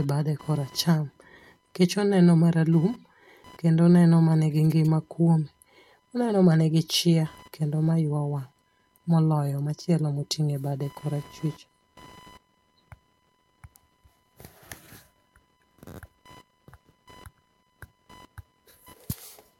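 Computer activity noise runs through the whole speech recording: a faint chirping buzz, pulsing at around 1 kHz and roughly 35 dB below the speech. Processor and graphics load changes shift the shared audio ground, so it flickers independently of speaking. Spectrograms show stacked lines near 1 kHz multiples.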